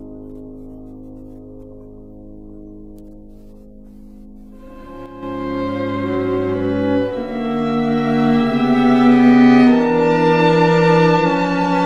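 From 5.06 to 5.23 s, for about 0.17 s, the sound abruptly loses about 6 dB and then returns just as suddenly. The drop is level across the whole sound, with no gap or click. This is likely one channel dropping out. When one stereo channel goes silent, the mono sum loses half of whatever the two channels shared. That is exactly a 6 dB fall. Anything carried only by the missing side vanishes for that moment.

At 9.35 s the sound turns duller and stays that way to the end of the clip. The treble is suddenly cut off, with nothing left above 9.8 kHz, and there is no break in playback. This is an adaptive stream switching to a lower bitrate. When the connection slowed, the player changed to a leaner version of the same AAC stream. The narrowed bandwidth fits a drop from roughly 96 to 32 kbit/s.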